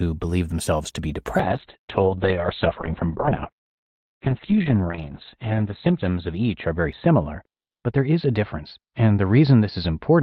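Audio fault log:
1.4–10.23 s, call bitrate drop: right after "believe themselves to be" the encoder's rate falls from 48 kbps to 6 kbps, bottoming out for about 3.9 s, and the audible band shrinks from 20 kHz to 4 kHz. Speech turns muffled and watery, with coarse, rough texture. Unlike a plain low-pass filter, the remaining band also carries coding grit. Unlike packet loss, there are no gaps or stutters, and the degradation persists continuously to the end.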